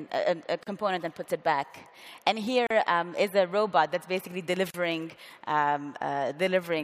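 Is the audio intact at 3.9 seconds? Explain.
Yes, the audio is intact at 3.9 seconds, with no dropout, click, distortion or other fault at that moment.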